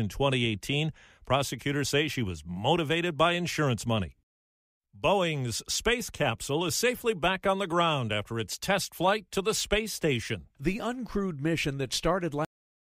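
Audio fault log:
12.45 to 12.88 s, cut-off end: the speech just stops dead at 12.45 s, mid-sound, and the last 0.43 s or so is flat digital silence. There's no tail or natural decay, so it feels like someone yanked the cable. What's happening is that the final stretch of audio never got written out or played back, so the recording ends wherever the last buffer that made it through happened to stop.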